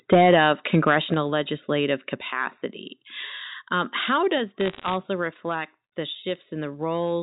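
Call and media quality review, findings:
Harsh, crackling edge on loudest syllables, 0.12 to 0.97 s. Microphone overload: peaks driven about 5 dB past converter full scale, tops flattened, a few percent of samples clipped. Likely cause: mic input gain set too high.

Abrupt level drops, voice and background together, at 0.14 s (about 2 dB), 1.14 s (about 4 dB) and 4.38 s (about 3 dB, right after "um how"). Microphone volume stepped down: the first lands inside the clipped stretch. Likely cause: call software's automatic gain control cutting device input volume in single steps after detecting overload.

Burst of sharp ticks and crackle over unchanged speech, 4.60 to 4.94 s, just before "reflect the". Bit errors on a digital phone line: scattered flipped bits, on the order of one in a hundred or fewer, each corrupting one sample. Hits on sign or high-order bits of the G.711 mu-law words give the loudest clicks. 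Likely cause: a noisy or errored link carrying the 64 kbps stream.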